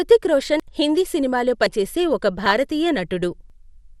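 Throughout the clip the speech sounds dull and plainly damaged, with a gurgling, granular roughness in the upper range. This is likely MP2 compression at a low rate, one that points to around 80 kbps. MPEG Layer II divides the signal into 32 equal sub-bands and shares out a bit budget among them. With so few bits, upper bands keep switching off and back on, and the bands that remain are quantised coarsely.

At 0.60 s, right before "హిందీ సినిమాలో", the speech jumps forward. The gap is about 40 ms, likely a dropped buffer (overrun). The hardware overwrote samples that the software had not yet collected, so the audio on either side is spliced directly together with no silence. The same skip recurs at 1.66 s, after "హిందీ సినిమాలో", with roughly a tenth of a second lost, and at 3.50 s, where roughly 150 ms goes missing.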